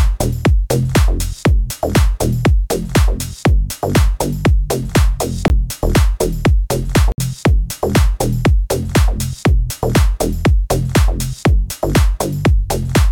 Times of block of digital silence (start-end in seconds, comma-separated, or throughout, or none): 5.48, 7.12-7.18